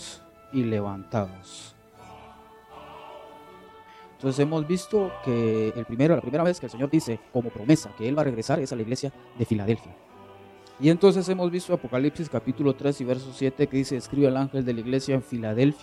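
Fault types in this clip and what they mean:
Time-stretched section: from about 5.42 to 9.90 s the pace suddenly jumps to roughly 1.69 times normal while the pitch stays put, so it comes across rushed, likely from software squeezing that stretch by dropping short slices to fit a shorter length.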